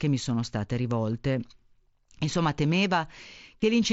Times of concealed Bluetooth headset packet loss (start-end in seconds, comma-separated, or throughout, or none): 1.12, 3.60